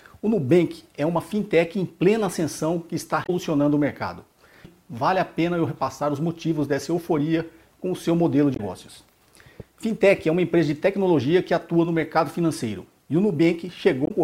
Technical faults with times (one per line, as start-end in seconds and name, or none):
0.00-14.23 sample clock jitter
3.23-3.29 damaged data in a compressed stream
8.53-8.60 damaged data in a compressed stream
14.04-14.11 damaged data in a compressed stream